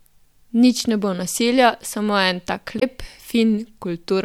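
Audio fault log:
2.76–2.83 s: damaged data in a compressed stream. A short disturbance cuts into the speech for about 70 ms. Part of the compressed data here is corrupt. The decoder cannot read those frames correctly and produces garbage before it loses sync. It then hunts for the next valid frame header and resumes from there.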